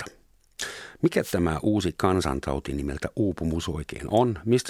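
Speech with a single wireless microphone noise hit from 1.21 to 1.35 s, a burst of static about 0.13 s long as the FM radio link fades and receiver noise swells over the talker. A digital dropout would instead leave silence or a hard gap.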